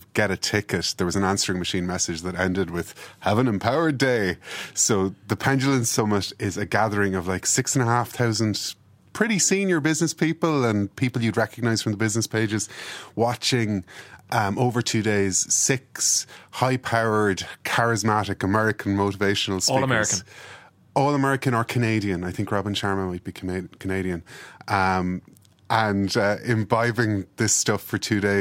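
Speech recording with no audible technical faults.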